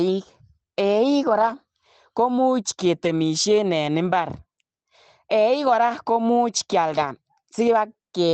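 Around 1.29 to 1.51 s, then 3.03 to 3.09 s, 5.71 to 5.73 s and 6.89 to 7.07 s, the speech turns briefly rough and grainy instead of dropping out. That's a lost packet rebuilt from error correction. Audio went missing but the next packet carried a low-quality spare copy, so the decoder filled the hole. The rebuilt stretches run about 120, 40, 20 and 100 ms, which fits six, two, one and five lost 20 ms packets.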